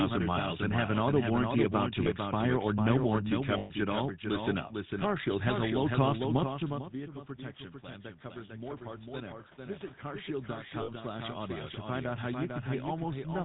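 It's a speech clip, and the whole thing runs through the GSM full-rate codec: nothing survives above 4 kHz and there's that buzzy, gravelly roughness from the pulse-train excitation, which fits a 13 kbps channel. On top of that there's a doubled audio track throughout, with a second full-band copy trailing about half a second behind at roughly 5 dB down, dry and with no room colour, likely a second capture path or an edit holding two copies out of step. You also get lost GSM frames at 2.04–2.07 s (between "auto warranty about to" and "expire or"), 3.58–3.71 s and 10.82–10.90 s, where the decoder repeats the last good frame so the sound hangs as a short metallic ring, longest in the middle one at about 120 ms. Right after "about to expire or", automatic gain falling pulls things down by about 4 dB from 2.88 to 4.25 s, and the speech and background sink together. Then automatic gain rising swells everything back up about 5 dB from 4.22 to 7.23 s, leading into "protection plan", with the talker also shifting position around 6.5 s. 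It rises again from 8.32 to 12.96 s, about 8 dB, chasing an input that had dropped by about 16 dB, so the background comes up along with the voice.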